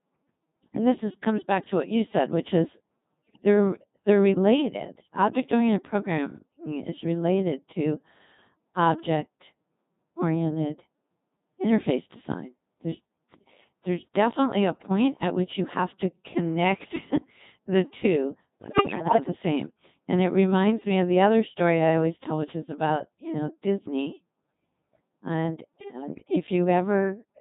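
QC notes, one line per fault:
Throughout: Codec 2 vocoder. The speech has the robotic, buzzy quality of a very low-rate vocoder. The coder transmits only pitch, voicing, level and a rough spectral envelope, so the decoder rebuilds the voice from sine waves instead of keeping the waveform. The degradation here is heavy, and the thin, synthetic timbre fits Codec 2 running around its 2.4 kbit/s mode. Breath, texture and anything beyond a single voice come out smeared or mangled.
3.15–3.46 s, 18.62–19.24 s and 25.75–26.36 s: bit errors on digital voice radio. In each of these stretches the synthetic voice suddenly lurches in pitch, loudness and tone colour, then breaks into warbles, bleeps and garbled robotic noise. The longest burst is around 18.6 s, lasting about 0.6 s. Flipped bits are corrupting the few parameters that define each frame. The first two bursts suggest roughly one bit in ten going wrong, and the last one slightly fewer, typical of a link at the edge of coverage.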